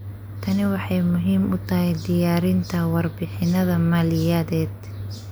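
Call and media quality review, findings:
No audible faults found in this speech recording.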